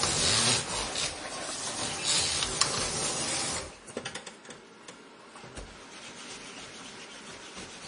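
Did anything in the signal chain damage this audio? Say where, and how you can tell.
Yes, at the codec stage, and it runs through the whole clip. Nothing comes through above about 10.5 kHz, a hard ceiling rather than a natural roll-off. Under that, the sound has a watery, swirly quality as quieter detail flickers in and out, and transients smear. That points to heavy MP3 compression, with the encoder starved of bits, likely at a low rate around 32 kbps. It drops the treble and then thins whatever it can't afford to keep.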